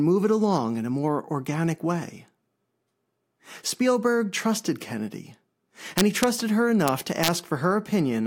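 From 5.98 to 6.24 s, and again from 6.88 to 7.28 s, the speech breaks into violent cracks. This is integer overflow. Peaks driven about 1 dB past the limit wrapped to the opposite sign instead of being held. Each one snaps across the full range, far harsher than clipping.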